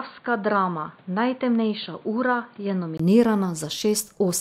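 Input switched to a poorer device from 0.0 to 3.0 s: the speech is band-limited, with nothing above 4.6 kHz, about 5 dB quieter, and carries its own noise roughly 30 dB down. A 20 ms gap at 3.0 s marks the likely return to the better microphone.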